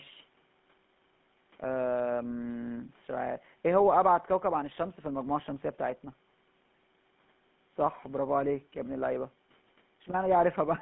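From start to finish the speech carries GSM full-rate codec damage, which fits a 13 kbps stream. The coder models the vocal tract and drives it with sparse, regular pulses, so voiced sounds turn plainly buzzy and gravelly inside a 150 Hz to 3.5 kHz line band. That grainy roughness, not just the missing top end, separates it from simple narrowband filtering.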